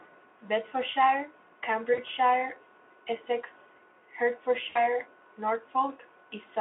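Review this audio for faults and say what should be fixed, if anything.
Voice packets were dropped twice on the network path, at 1.93 to 1.99 s and 4.69 to 4.86 s. Each time the Speex decoder filled the gap by extrapolating from its last pitch and filter with falling gain. The gaps, about 40 ms and 60 ms of missing audio, fit two and three 20 ms frames. This VoIP packet loss concealed by the speech codec smears the speech into a fading buzz or coloured noise. Because each frame builds on the last, the speech stays weak briefly after packets return. A larger jitter buffer plus forward error correction or redundant packets on the link would keep such losses from reaching the decoder.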